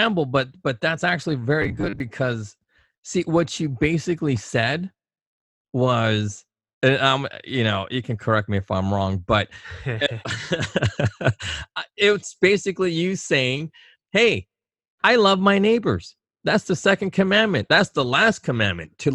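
Robotic sound from repeated short buffers at 1.62 to 2.00 s, after "but but that's actually": a metallic 100 Hz buzz, likely from 10 ms chunks repeating in place of roughly half the audio.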